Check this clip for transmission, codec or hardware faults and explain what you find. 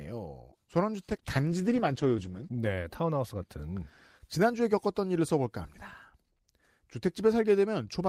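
One transmission fault is present in the speech, between 1.09 and 2.85 s.

From 1.09 to 2.85 s the sound turns rough, watery and muffled. This is a call bitrate drop: the encoder was starved of bits, which fits a fall from about 48 to 15 kbps, so it coded coarsely and cut the highs.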